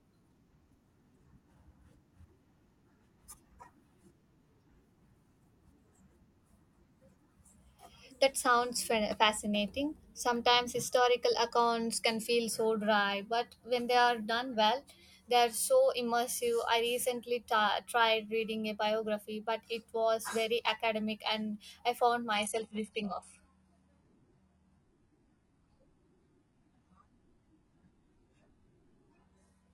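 Adaptive stream at a lower bitrate from 22.36 s to the end of this speech clip: the quality drops abruptly with no gap, as the player switches to a leaner version of the stream when the connection slows. Nothing is present above 11.5 kHz from that point, and the sound takes on a thinner texture with heavier codec artefacts, which fits a change from about 96 kbit/s AAC-LC to roughly 12 kbit/s HE-AAC.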